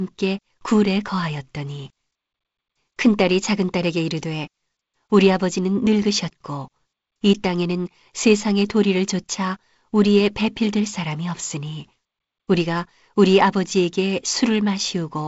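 No technical faults are audible.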